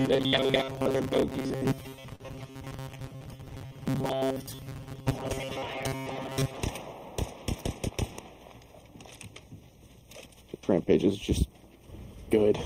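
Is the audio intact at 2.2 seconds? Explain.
No. Three faults overlap at 2.2 seconds.

A short stall from a late packet runs from 2.15 to 2.22 s. A packet arrived late, so the jitter buffer ran empty. The receiver stretched the last sound for 43 ms, then resumed from the same point, so nothing is lost but everything after is 43 ms late. You hear a held moment. On a waveform it shows as a short stretch of repeating cycles. On a spectrogram it looks like a frozen, smeared slice.

That stall sits inside a longer stretch of robotic sound from repeated short buffers, running from 0.01 to 6.57 s. The likely cause is audio arriving too seldom, with the software repeating the last few milliseconds to fill each gap. Most of the real audio is skipped and replaced by repeats. The sound becomes a rigid, metallic buzz at 133 Hz, which fits a repeat length of about 7.5 ms. A spectrogram shows fixed harmonic lines at multiples of 133 Hz, and the waveform shows identical repeating segments.

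Channel delay (comb filtering) is present throughout. One channel lags the other by a fraction of a millisecond, and summing them to mono cancels shared content at evenly spaced frequencies. The first notch falls near 1.5 kHz, and the sound is hollow and phasey. A spectrogram shows steady dark horizontal bands at regular spacing.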